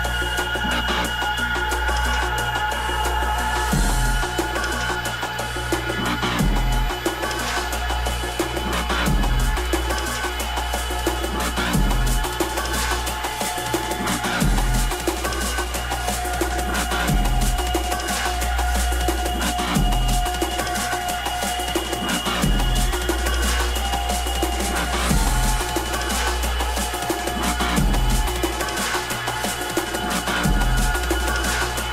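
USB bus current drawn in 1 ms frames leaks in, leaving a fixed-pitch USB whine throughout at 1 kHz multiples, strongest at 13 kHz, roughly 25 dB below the sound.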